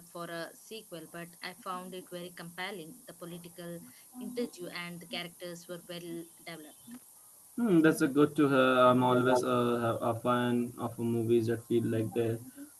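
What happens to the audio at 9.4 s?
From 9.13 to 9.44 s an echo leak adds a delayed copy of the speech, arriving 224 ms late and about as loud as the original. It is likely a far-end loudspeaker echo that the echo canceller failed to remove. On a spectrogram the harmonic and formant patterns repeat about 0.22 s later, and the waveform shows a doubled, smeared envelope.

Low bit depth with noise shaping is also present at this moment, as it is throughout. The audio sits at 7 bits, and the rounding noise is pushed upward in frequency. It is heard as a thin, steady hiss only about 15 dB below the speech. A spectrogram shows a noise floor that brightens toward the top of the roughly 12 kHz band.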